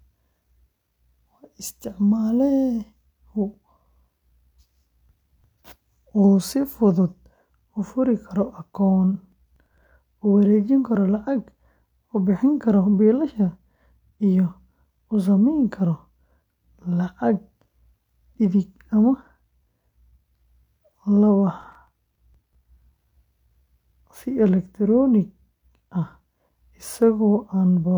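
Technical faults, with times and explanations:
9.32 to 9.84 s and 21.61 to 22.55 s, processor overload crackle: about ten short buffers, around 5 ms each, missed their deadline and replayed stale audio, producing bursts of gritty crackle.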